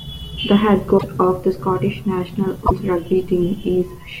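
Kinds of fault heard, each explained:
Broken MP3 bit reservoir: two disruptions of about 64 ms, at 0.97 to 1.04 s and 2.65 to 2.72 s, likely from frames decoding borrowed data that belonged to missing frames. They show as waveform discontinuities spanning roughly three 24 ms frames.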